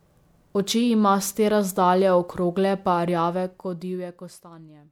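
Generation loss runs through the whole of this speech recording, likely from about three successive MP3 encodes, which fits a 128 kbit/s chain. Each pass requantises on a shifted frame grid, so noise and spectral holes accumulate, leaving the sound swirly, hollow and smeared, with softened attacks.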